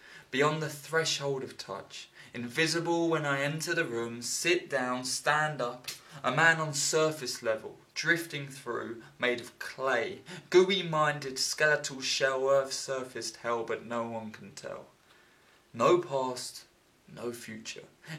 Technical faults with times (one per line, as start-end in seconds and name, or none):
none